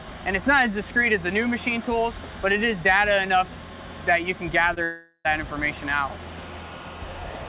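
Audio carried over a call path whose band stops at 4 kHz, consistent with G.711 mu-law at 64 kbps. At 4.74 to 4.79 s there is a short concealed packet loss. Roughly 20 ms of audio failed to reach the decoder in time, and the receiver bridged the gap by extending the preceding sound for about 25 ms before blending back into the real signal. It comes across as a brief smear or wobble.

Just after, from 4.83 to 5.27 s, the sound turns into a continuation of the last signal that decays, lasting about 0.41 s, followed by about 60 ms of silence. The audio then resumes with roughly 12 ms missing at the join. This pattern points to a long network dropout as the likely cause: about 0.42 s of audio never arrived, and the receiver's concealment faded out before the stream recovered.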